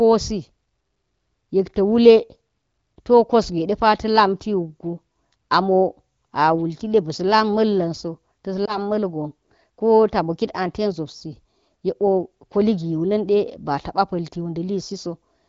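At 8.65 s the speech briefly dips and warbles before recovering by 8.78 s. This is a lost AMR speech frame. A radio error made the frame fail its checksum, so the AMR-WB decoder filled the gap by repeating the previous pitch and vocal tract settings at reduced gain. The short disturbance fits a single lost 20 ms frame, and the sound that follows returns weak or rough for a moment. The surrounding audio shows the light coding of wideband AMR, which points to a rate around 15.85 kbit/s.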